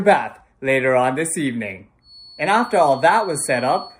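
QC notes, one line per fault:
2.0–4.0 s feedback whistle: a thin 4.4 kHz tone about 25 dB below the sound that wavers, unlike a steady electrical tone. Likely a speaker-to-microphone loop held at the feedback point.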